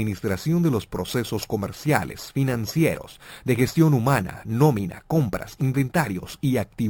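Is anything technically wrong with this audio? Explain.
Yes. Throughout, there is imaging from sample-and-hold upsampling. The audio was raised from 12 kHz to 48 kHz by repeating each sample without smoothing. Mirrored copies of the spectrum result. The first sits between 6 kHz and 12 kHz, about 21 dB below the signal. It adds a bright metallic fizz that tracks the level.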